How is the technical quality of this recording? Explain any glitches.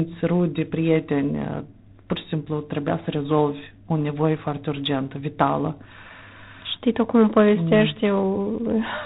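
The quality is poor, held back by one fault present for the whole clip. G.726 ADPCM coding damage runs throughout, from start to finish. The coder sends each sample as a few bits describing its difference from an adaptive prediction. Here the coarseness of those steps fits 24 kbit/s, so quantisation noise is high. The speech carries a harsh, rasping hiss that rises and falls with its level. Nothing above 4 kHz comes through, leaving a narrow telephone sound.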